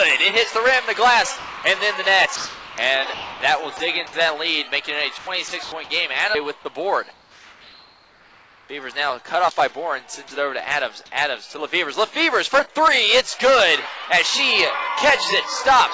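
Sound dropped by the voice detector at 1.37–1.64, 2.36–2.78, 3.14–3.41, 3.77–3.80 and 4.07–4.13 s: brief losses, likely from the sender's detector treating sound as background, with synthetic hiss filling each gap. From 5.18 to 5.72 s the sound is chopped by the voice detector, which likely switches on and off repeatedly so that fragments alternate with fill noise. Between 7.13 and 8.69 s, comfort noise likely replaces the background, giving a steady, featureless hiss about 3 dB quieter than the real ambience. At 10.28–10.31 s a final short dropout, likely of the same kind, occurs. Throughout, the call codec leaves nothing above 8 kHz.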